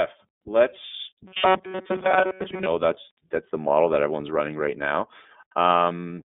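Speech, carried throughout by the iLBC codec, with plainly audible damage. The band is confined to roughly 200 Hz to 3.6 kHz, and nothing above 3.7 kHz survives, so the sound is dull and narrowband. The coder works on 30 ms blocks, each excitation built independently of the last, which fits iLBC's 13.33 kbps mode and gives the speech a slightly rough, synthetic grain. From 1.27 to 2.66 s there is a robotic sound from repeated short buffers: the speech collapses into a rigid metallic buzz at about 188 Hz that still loosely tracks the speech contour. The likely cause is audio arriving too slowly, with playback looping the last fragment to fill the gaps. A 188 Hz pitch fits a loop of about 5.3 ms. Most of the real audio in that stretch, roughly 70 percent, is replaced by these repeats and skipped.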